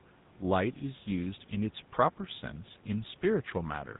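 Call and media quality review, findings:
GSM full-rate codec, throughout: plainly audible buzzy, gravelly roughness on speech. Spectrogram shows a hard ceiling at 4 kHz and coarse, regularly spaced pulse striations. The excitation keeps every third sample, which fits 13 kbps GSM full rate. Room noise sits about 30 dB down.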